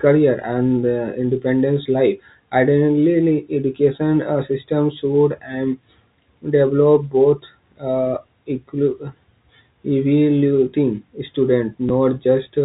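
At 11.89 s, near the end of the speech, there is a single instance of packet loss with the last packet repeated. About 10 ms of audio never arrived, which points to one lost packet, and the receiver filled the gap by replaying the preceding chunk. The replayed chunk produces a small blip rather than the silent hole a plain dropout would leave. It sits within the narrow G.711 telephone band.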